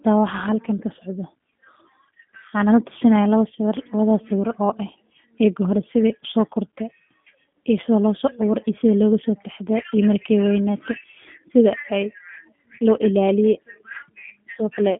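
From start to finish the speech carries G.729 codec damage, with the slightly rough, synthetic texture that points to the G.729A variant at about 8 kbit/s. The codec models each 10 ms frame as a vocal tract filter, a pitch predictor and a few pulses rather than the waveform itself, so fine detail is lost and the speech turns rough and buzzy. The line band spans 150 Hz to 3.5 kHz, with nothing above 3.6 kHz, leaving the sound narrow and dull.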